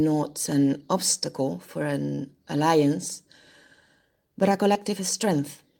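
At 2.15 to 2.20 s, just after "an obstacle for", a short stall from a late packet holds the sound about 28 ms too long while the receiver waits, then resumes where it left off. Nothing is skipped, so the speech drifts later rather than jumping ahead.

At 4.73 to 4.77 s, short concealed packet loss leaves a brief smear where about 15 ms of synthesized continuation covers a gap. Unlike the stall, roughly 20 ms of real audio is gone for good, so the speech jumps slightly forward instead of being held.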